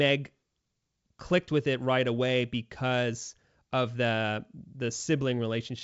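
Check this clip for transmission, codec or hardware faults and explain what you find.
Nothing here suggests a transmission, codec or hardware problem; the speech is carried over G.722 wideband coding at 64 kbit/s, and any trace that coding leaves is faint at most.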